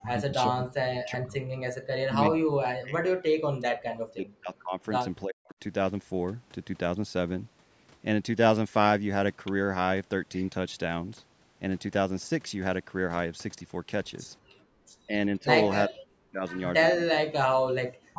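From 0 to 1.48 s, 2.04 to 4.81 s and 5.24 to 5.59 s the speech sinks and breaks up in pieces by about 40 dB, most likely speech suppressed in double talk: with both ends talking, the echo canceller mistook the talker for loudspeaker echo and turned everything down.

At 14.39 to 14.78 s the background is gated by the echo canceller, dropping about 40 dB as it clamps the microphone while the loudspeaker plays. The room sound itself vanishes briefly, rather than speech breaking up, and returns as the canceller releases.

The speech suppression returns at 15.06 to 15.49 s, shallower at about 10 dB, then deep again at 15.86 to 16.6 s, 16.87 to 17.33 s and from 17.97 s to the end.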